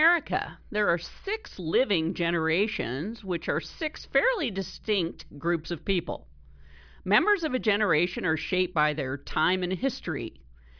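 No technical faults can be heard anywhere in this speech recording; the signal stays continuous and stable throughout.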